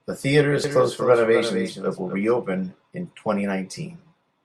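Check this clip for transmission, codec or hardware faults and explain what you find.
One fault is present: a doubled audio track from 0.64 s to 2.24 s. A second, full-band copy of the speech trails about 300 ms behind, roughly 10 dB quieter, most likely because a slower capture path recorded it again. Unlike echo or reverb, it has no decay or room colour, and it starts and stops abruptly.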